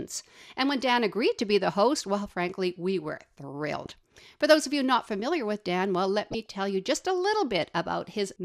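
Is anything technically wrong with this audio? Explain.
Yes. DAB burbling occurs at 0.87–0.91, 3.85–3.92, 6.32–6.51 and 7.97–8.07 s. Bit errors at a fraction of a percent slip past error correction and corrupt MP2 sub-band samples. Individual bands get short blips of noise over the speech.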